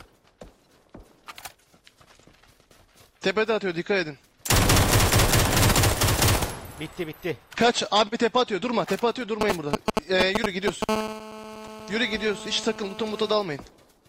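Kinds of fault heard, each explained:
GSM signalling bursts: A 2G handset close to the recording chain is exchanging short control transmissions with the network, and the audio circuitry rectifies those radio pulses into the signal. From 9.41 to 10.84 s this comes through as a galloping dit-dit-dit of brief buzzes pulsing at about 217 Hz. The bursts stand out clearly, somewhat louder than the wanted audio, and they start and stop in irregular clusters.
GSM phone buzz: The handset then settles into an active call and transmits in bursts 217 times a second. The rectified pulse train becomes a steady interference tone with no relation to the program material. From 10.89 to 13.34 s a hard, raspy buzz at 217 Hz, rich in harmonics, sits underneath the audio at about 11 dB below it. It follows the signalling bursts almost without a gap.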